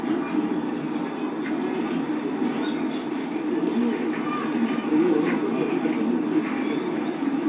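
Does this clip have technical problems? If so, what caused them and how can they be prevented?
No, the signal shows no technical faults, so there is nothing here that needs preventing.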